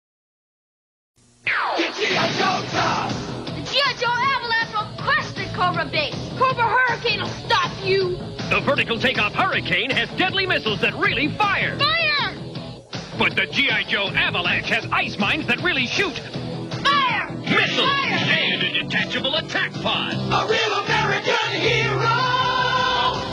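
At 16.76 s the adaptive stream switches to a lower bitrate and stays there to the end at 23.33 s. The change is abrupt, with no gap: content above about 11.1 kHz disappears, which fits a very-low-bitrate HE-AAC fallback.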